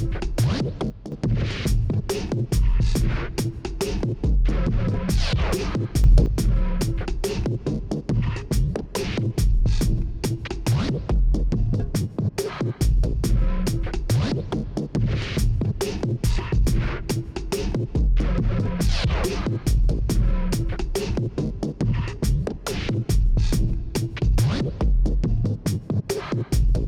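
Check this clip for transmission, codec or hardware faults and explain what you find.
Two sudden gain jumps are audible. From 0.9 to 1.12 s the level drops abruptly by about 9 dB. From 6.04 to 6.26 s it rises abruptly by about 6 dB. Each change lands between one sample and the next, with no fade. The sound and the background noise shift together, so the whole signal steps down, then up. The likely cause is a gain setting or bit shift applied without a ramp.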